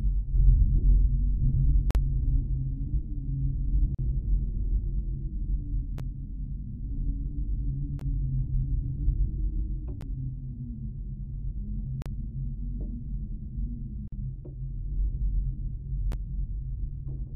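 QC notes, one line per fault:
1.91–1.95, 3.95–3.99, 5.98, 7.99–8.01, 10.01, 12.02–12.06, 14.08–14.12, 16.12 s: gap between stream segments. Hard-edged silent holes of 12 to 45 ms recur every 2 s, where segment timestamps leave gaps the player fills with silence, though no audio is lost.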